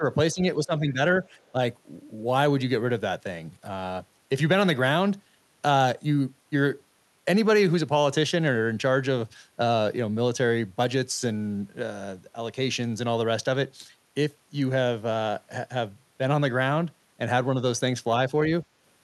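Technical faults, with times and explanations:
0.00–0.05 s, 0.34–0.41 s, 0.57–0.99 s and 1.52–1.58 s: speech suppressed in double talk. The level ducks by roughly 10 dB in short bursts, the longest lasting around 0.3 s at 0.57–0.99 s. The others are brief nicks of a few tens of milliseconds. This pattern is likely the echo canceller's suppressor misreading simultaneous talk as echo and attenuating the near-end signal along with it, so the sound drops and thins in pieces.
1.40–1.51 s: other side's voice leaking through. A very faint second voice, around 40 dB below the main speech, slips through for about a tenth of a second just before the suppression at 1.52 s. The echo canceller likely left a small residue of the loudspeaker signal in the microphone path. At that level it registers as a barely audible scrap.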